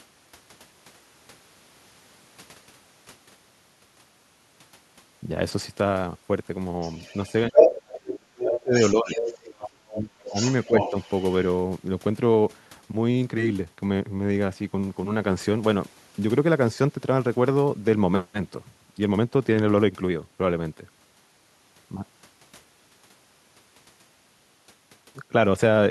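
An echo canceller that likely failed to remove the far end's loudspeaker sound lets the other side's voice leak through from 6.81 to 7.91 s, louder than the talker by about 5 dB. It returns more faintly from 8.54 to 9.7 s and faintest from 10.29 to 11.46 s.

Because both sides talk at once, the canceller likely cannot separate the talker from the echo, so speech is suppressed in double talk from 7.92 to 9.25 s and again from 9.59 to 10.95 s. The voice drops by up to about 35 dB, roughly a second in total each time.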